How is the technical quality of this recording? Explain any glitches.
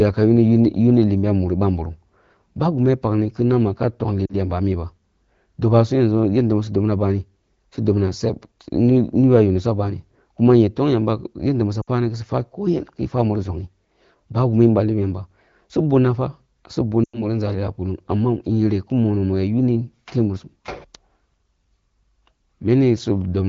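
The recording has three short dropouts from lost AMR speech frames, heard through wideband HD Voice coding that sounds clean, in line with a rate around 12.65 kbit/s. The dropouts fall at 4.26 to 4.35 s, just before "yamba a’ miba"; at 11.82 to 11.89 s, between "tong yamba yanda su" and "sufwa ko yen ya"; and at 17.04 to 17.26 s. Radio errors corrupted frames, and the decoder filled each gap by stretching the last good sound with falling gain. The first two quickly drop toward near silence. The third, the longest at about 100 ms, drops to near silence and comes back rough for a moment.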